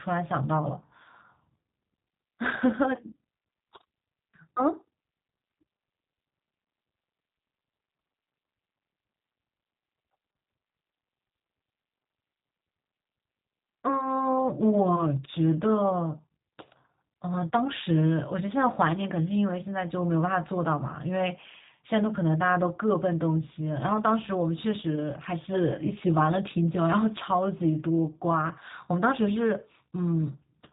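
Speech runs through the G.729 codec from start to finish: nothing passes above 3.8 kHz, and the voice has a rough, buzzy, synthetic edge, which fits 8 kbit/s G.729A. A plain telephone band-limit would only dull the sound, without this reconstructed grain.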